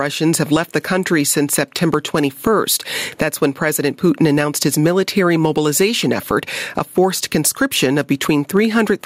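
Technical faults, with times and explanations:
Throughout, gain pumping: the gain ducks under each loud sound, swinging by around 15 dB, likely from input gain set far too high with a fast limiter clamping it. The waveform looks flattened.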